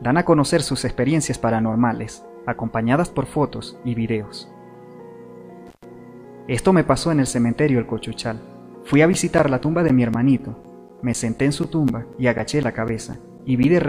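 At 5.67 s an intermittent contact breaks the signal until 5.84 s. A loose plug or cable opens for about 120 ms, so the sound drops out with crackle at both edges and faint hiss in the gap, a single irregular break unlike evenly spaced dropouts.

From 9.13 to 13.64 s come periodic USB or driver dropouts: every 0.25 s a background task stalls the audio path and roughly 10 ms is replaced by silence, about twenty times. They sound as clean, metronomic ticks, with no crackle or hiss.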